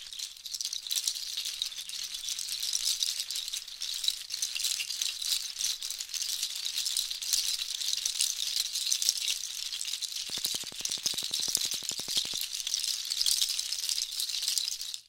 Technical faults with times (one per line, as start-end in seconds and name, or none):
10.30-12.35 train of clicks